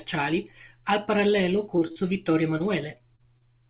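Right after "al parallelo", from 1.76 to 1.98 s, the speech turns choppy and robotic. This is repeated packet loss. Four gaps, the longest 39 ms, leave about 100 ms missing, and the receiver patches each hole by stretching the last sound, so nearly half of that short stretch is synthetic continuation. What separates it from a single dropout is the rapid succession: the patches arrive before the voice can settle, giving a stuttering, choppy texture rather than one smear.

At 2.58 to 2.62 s there is a short concealed packet loss. About 20 ms never arrived, and the gap was bridged by extending the preceding sound and blending back into the real audio. It is heard as a single brief smear or wobble, not a run of them.

From 2.98 to 3.43 s the repeated packet loss returns. There are again four gaps, the longest 35 ms, with about 100 ms lost in total. Spread over a longer span, the patches cover only about a fifth of it, so the robotic choppiness is sparser than in the first burst: intermittent warbles. 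Throughout, nothing is heard above 4 kHz, which fits a narrowband G.711 telephone codec.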